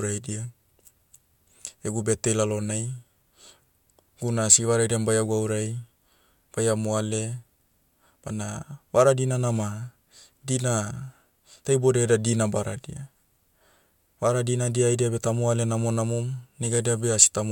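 No technical faults are audible anywhere in the speech recording.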